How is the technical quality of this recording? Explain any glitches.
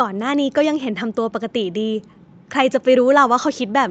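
No glitches to report: the speech carries ordinary call microphone processing, with nothing above 8 kHz and the lowest bass trimmed by its high-pass filter, both normal for that path.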